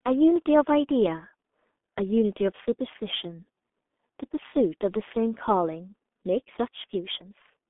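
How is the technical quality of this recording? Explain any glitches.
Quality is poor throughout: the speech sounds muffled and hoarse from start to finish, with consonants smeared together and no brightness at all, because it has passed through the G.723.1 codec. This low-rate telephony coder works on 30 ms frames and refreshes its model of the voice slowly, so fast articulation blurs. The damage is heavy and consistent with a rate near 6.3 kbit/s. The band sits in a narrow telephone range of roughly 200 Hz to 3.5 kHz, with nothing above 3.7 kHz.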